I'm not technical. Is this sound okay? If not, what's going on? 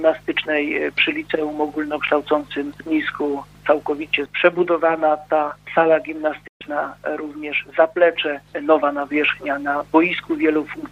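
No. At 6.47 s there is a digital broadcast dropout. The receiver briefly lost the signal, or got damaged frames, and muted itself. The sound cuts out almost instantly, goes silent for about an eighth of a second, and returns at 6.62 s. That moment is simply missing.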